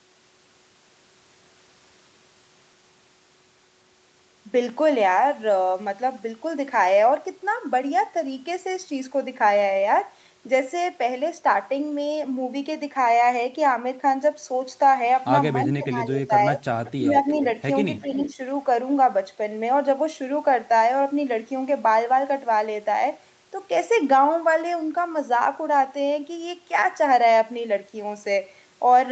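Between 15.66 and 16.62 s, the voice dips by about 10 dB in pieces, likely speech suppressed in double talk: the echo canceller ducks its own talker along with the echo while both sides talk. It happens again at 16.98 to 17.26 s, and more gently (about 5 dB) at 18.01 to 18.39 s. Alongside these, short echo-leak scraps come through at 16.85, 17.34 and 18.25 s. They're faint delayed copies, about 356 ms late and roughly 20 to 25 dB down, likely left over after the canceller failed to scrub the loudspeaker pickup.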